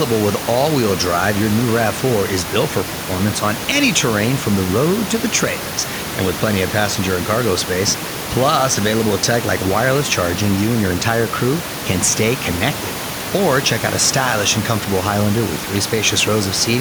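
Nothing goes wrong with the system anywhere in this speech recording; the only thing underneath the talking is the room's own background noise, sitting about 11 dB below the speech, which is simply part of where the microphone was.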